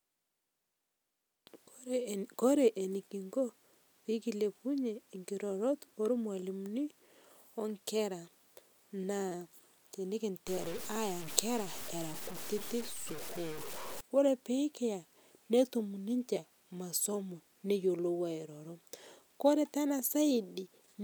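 From 10.48 to 14.01 s, just before "ore pikiya netum", low bit depth without dither sets in, likely from truncation to about 7 bits. The error tracks the speech, so quiet stretches turn gritty, with grainy distortion only roughly 15 dB below it.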